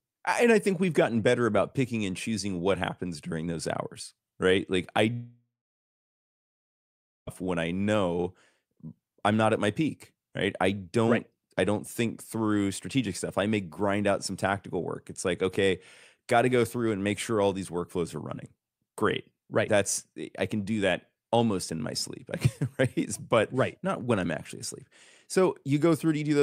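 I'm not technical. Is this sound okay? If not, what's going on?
No. There is a long network dropout from 5.13 to 7.29 seconds. The speech breaks off into a brief fading buzz, then about 1.8 seconds of silence, and resumes with about 2.1 seconds missing, likely because the connection stopped delivering audio for that stretch.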